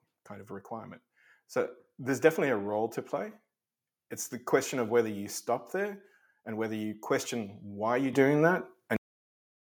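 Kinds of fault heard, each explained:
Microphone volume stepped up: The input level rises in one sudden step at about 8.13 s, by about 8 dB. The voice and the background noise jump together, so the whole picture gets louder at once. That points to the microphone's own input volume being raised, not to a change in how the talker spoke. Nothing fades in or ramps. The gain simply shifts between one moment and the next.
Cut-off end: The audio stops abruptly at 8.96 s, in the middle of a sound. There is no natural decay and no trailing room tone. The signal drops straight to digital silence and stays there to the end. This happens when the final stretch of buffered audio is never written out or played. Whatever was still being said is sliced off instead of finishing, and the sudden stop leaves a hard edge.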